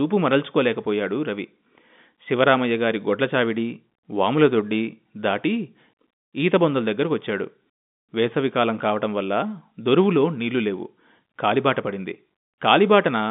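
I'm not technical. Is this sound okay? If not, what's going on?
Yes, nothing stood out as a problem when listening to this recording.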